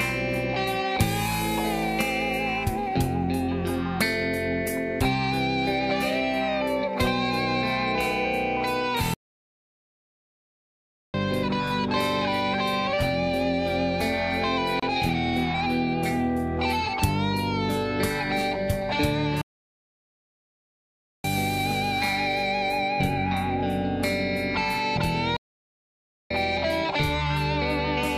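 At 9.14 s the sound just stops dead and stays silent until 11.14 s, a full 2 s, then resumes. That's a playback stall. The player most likely ran dry of data or had its thread blocked, so the output simply went quiet until it caught up.

At 14.80 to 14.83 s there's a much shorter hole, about 29 ms, with edges smeared by the codec. This is a gap at a join of encoded pieces. The audio was encoded in separate chunks and glued together without trimming, so the encoder's start-up delay and last-frame padding were left in as silence. After it, the sound carries on from where it broke off.

The stall comes back twice more. From 19.41 to 21.24 s there's about 1.8 s of silence, and from 25.36 to 26.31 s there's a shorter dropout of roughly 0.94 s. Both are the same stop-then-resume behaviour as the first.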